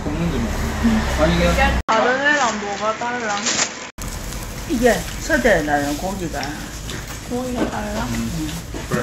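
At 1.81 s the audio drops out for about 80 ms, then returns with nothing above 7.6 kHz and a faint new background noise well beneath it, at much the same loudness as before, until 3.98 s. This is likely an input switched to a poorer device. The gap at the changeover and the changed noise floor set it apart from a simple low-pass filter or codec bandwidth cut, which would dull the sound without either.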